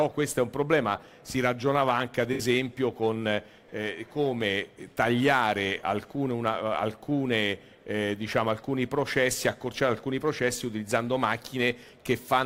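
At 2.33 s to 2.42 s there's a brief AAC frame loss with concealment. The decoder lost roughly 64 ms, which fits about three frames, and patched the gap from the last good spectrum, so you get a short smeared, noisy, phasey blur.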